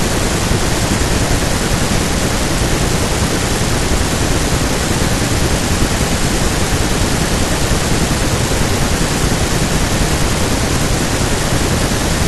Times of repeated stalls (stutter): none

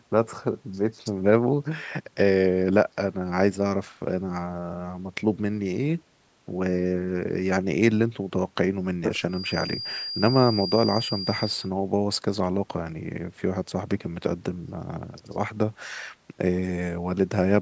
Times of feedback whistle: 9.26-11.71

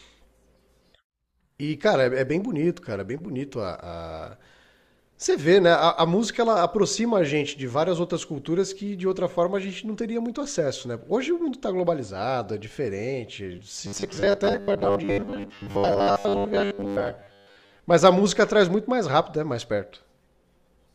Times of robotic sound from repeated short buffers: 13.87-17.80

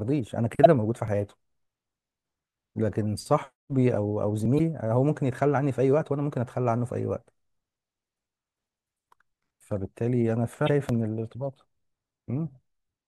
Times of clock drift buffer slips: 1.08-10.89

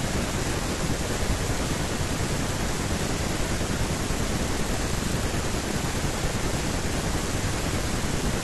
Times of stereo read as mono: none

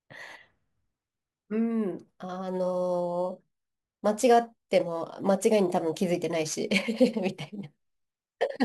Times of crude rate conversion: 2.47-8.65

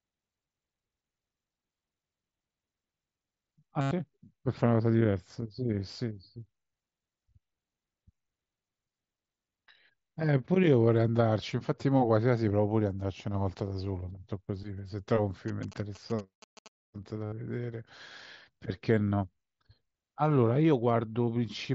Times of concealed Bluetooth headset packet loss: 3.81-3.91, 17.26-17.32

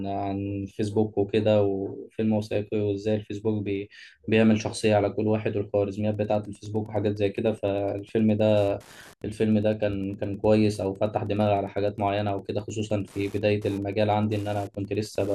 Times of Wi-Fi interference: 6.06-15.34

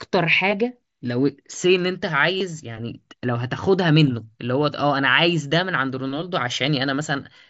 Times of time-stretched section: none

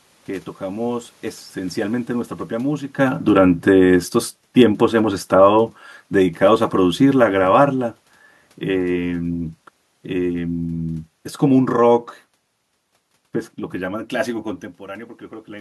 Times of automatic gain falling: 3.02-7.93

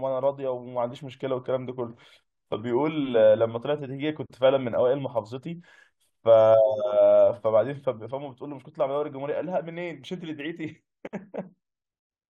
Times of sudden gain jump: 8.11-12.31

